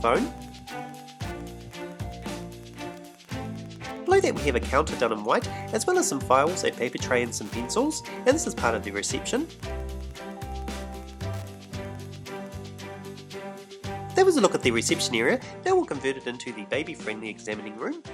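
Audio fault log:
0.00–12.70 s, Wi-Fi interference: a steady faint ticking, roughly 30 dB below the sound, repeating about ten times a second at a 102.4 ms spacing. A nearby Wi-Fi radio's beacon is being picked up and rectified by the audio circuitry, which turns each transmission into a click.
15.42–18.13 s, input switched to a poorer device: without any gap, the sound turns duller, with nothing above 10.5 kHz. It also drops by roughly 5 dB, and a new background noise appears some 45 dB below it. This likely comes from the recording input changing to a narrower-band device.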